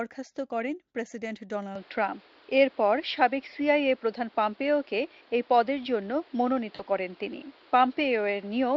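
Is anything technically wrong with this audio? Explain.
Yes, there are two faults.

From 1.75 s to the end, the sound abruptly turns duller. Nothing above 5.5 kHz remains, and a new background noise appears, roughly 30 dB below the signal. The level also shifts by a few decibels. There is no gap at the change. This points to an input switched to a poorer device. The likely cause is the system moving to another microphone or a headset profile with a narrower band and its own noise floor.

From 6.75 to 6.82 s there is VoIP packet loss concealed by the speech codec. About 40 ms of audio went missing, which fits two lost 20 ms frames. The decoder filled the gap by extending the last pitch and spectral shape while lowering the gain. The result is a brief, fading smear. The sound stays weak or distorted just after, as the decoder's state recovers. The Speex coding itself leaves little or no audible damage.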